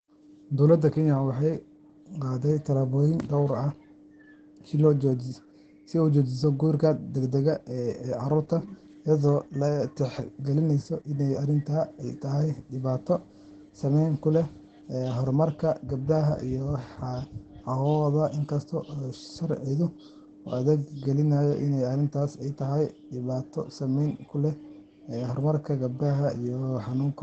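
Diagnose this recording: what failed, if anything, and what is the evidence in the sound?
Codec stage: Opus voice compression throughout, with nothing above 8.8 kHz and hoarse, slightly robotic speech, which fits SILK wideband coding at about 12 kbps.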